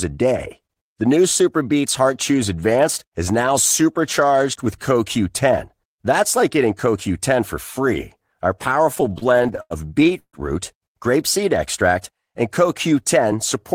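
Between 8.95 and 10.35 s the speech drags and stutters through 17 brief holds on the last sound, the longest 141 ms. These repeated stalls (stutter) came from late packets emptying the jitter buffer. Concealment filled 397 ms, with nothing lost.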